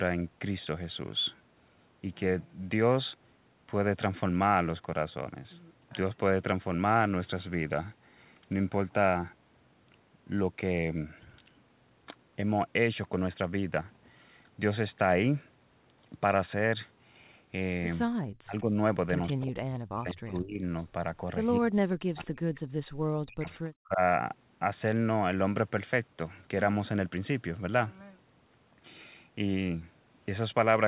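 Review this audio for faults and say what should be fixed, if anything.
Speech suppressed in double talk, at 18.38–20.63 s, 21.59–22.3 s and 23.25–24.0 s: the talker dips by about 40 dB in pieces, longest in the first stretch. This is likely an echo canceller mistaking overlapping far-end speech for echo and turning everything down. Tuning the canceller's double-talk detection to keep the near talker open would prevent it.

Echo leak, at 18.58–20.83 s and 22.22–23.56 s: a faint copy of the speech trails it by 191 ms, about 20 to 25 dB below the main level. This is likely loudspeaker sound that the far end's microphone picked up and its canceller failed to remove fully. A better-converged echo canceller or a headset on that side would prevent it.

Background gated by the echo canceller, at 22.61–22.97 s: the room sound drops out by about 40 dB for roughly 0.3 s and then returns. The canceller clamped the microphone hard while the loudspeaker played. 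Gentler suppression or comfort-noise fill would prevent this audible hole.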